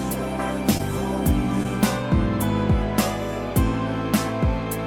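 Short concealed packet loss at 0.77–0.81 s and 1.63–1.66 s: about 20 ms went missing each time and was patched by extending the preceding sound, heard as a brief smear, showing as a smoothed, repeated-looking patch in the spectrogram.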